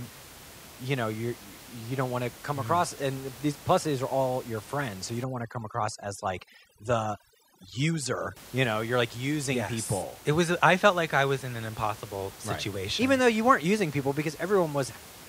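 From 5.24 s to 8.36 s, just after "your friends so you" and running up to "you know you're like", overdone noise removal sets in: the noise reduction is working far too hard, treating any frequency band close to its noise estimate as something to cut, so individual bands drop out or vanish along with the softer parts of the voice. The room noise, about 20 dB under the speech elsewhere, drops and breaks up into twinkling, warbling specks.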